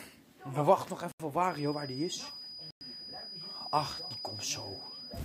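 At 1.12 s the sound drops out to silence for 80 ms and then resumes where it left off. This is a Bluetooth stall, likely caused by radio interference delaying packets until the headphones' buffer emptied, so playback halted until the retransmitted data arrived. A second stall at 2.71 s follows the same pattern, with 105 ms of silence before the sound continues.

From 1.41 s to the end, a thin, steady feedback whistle sits behind the sound at 4.9 kHz, roughly ten decibels below the main signal and swelling and fading slowly in level. It likely comes from a loudspeaker-to-microphone loop balanced just at the edge of feedback, where the gain at that one frequency is high enough to keep the tone ringing but not high enough for it to build into a howl.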